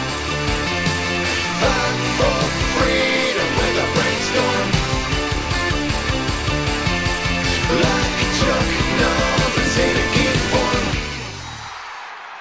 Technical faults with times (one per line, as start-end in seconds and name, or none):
none